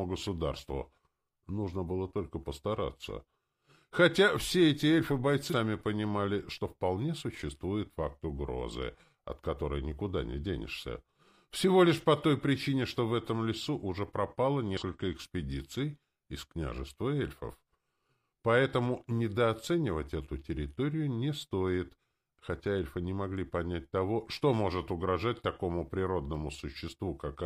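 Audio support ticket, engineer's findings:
Damaged data in a compressed stream: short glitches at 5.48–5.54 s and 14.77–14.83 s, each about 60 ms. Probable component: stream or file transport upstream of the decoder. Corrupted bytes break frame parsing, and the decoder outputs garbage until it resyncs on the next valid frame header.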